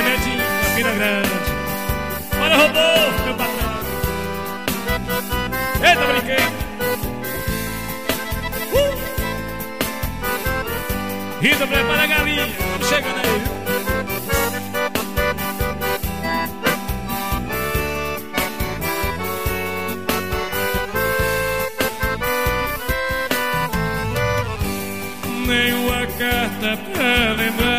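Computer activity noise runs through the whole recording. Changing load in the host machine, from processor, graphics or mouse activity, is disturbing the ground the audio circuit shares with it, and that ground movement is getting into the signal. The result is a buzzy, chirping layer pulsing at something like 150 times a second, sitting roughly 30 dB below the wanted sound and shifting with what the computer is doing rather than with the audio itself.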